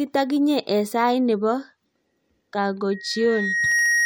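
At 2.91 s, a loudspeaker feedback squeal begins and runs to the end. A single 1.9 kHz tone swells over about a second until it sits a little above the speech. The microphone is hearing its own loudspeaker, and the loop gain at that frequency has passed one.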